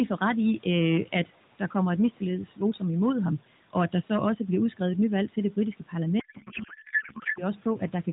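A speech recording, carried over an AMR narrowband mobile path with mild codec coloring and room noise about 23 dB below the voice, has hard clipping throughout. The level is driven about 7 dB past what the chain can pass, so a small fraction of peaks are sliced flat, adding high harmonics heard as crackle and edge on louder syllables. From 6.20 to 7.45 s, right after "nyvalg til det britiske", a codec payload misread occurs: octet-aligned AMR frames are decoded as bandwidth-efficient, so fields land in the wrong bit positions and the speech turns into garbled warble and noise that barely tracks it.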